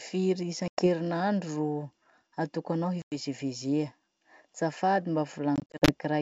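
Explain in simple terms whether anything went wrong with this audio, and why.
Packet loss on an ADPCM call cuts the speech at 0.68–0.88 s, 3.02–3.16 s, and in short scattered gaps from 5.56 to 5.94 s. Each time, a handful of packets went missing. Silence fills the holes. The decoder then briefly loses track, so the speech returns slightly distorted.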